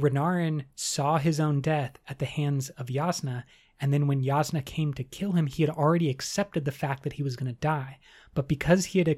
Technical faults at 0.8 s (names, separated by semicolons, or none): none